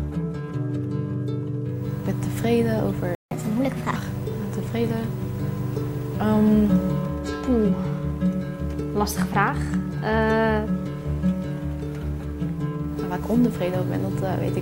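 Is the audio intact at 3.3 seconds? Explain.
No. At 3.15 s the sound cuts out mid-flow and stays silent until 3.31 s, a gap of about 161 ms, then resumes where it stopped. This is a playback stall, likely the player running short of buffered data or its thread being blocked. From 3.31 s to 3.96 s the audio rushes along at 1.25 times normal speed, pitched up by about four semitones, before settling back. This is catch-up at higher speed: the player resamples its backlog to recover the time lost in the stall.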